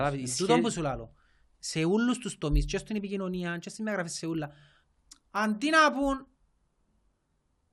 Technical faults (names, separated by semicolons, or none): resampler restarted on every block